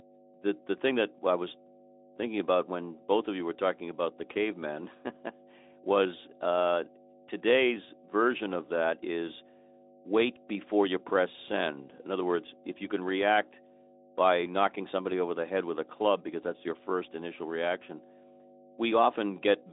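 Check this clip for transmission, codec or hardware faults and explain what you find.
One fault runs through the whole clip: mains hum. A ground loop or nearby transformer leaks the 50 Hz power line into the signal. It sits as a steady low drone, only about 10 dB below the speech. The narrow phone-like band, with nothing above 3.8 kHz, comes from the Speex codec.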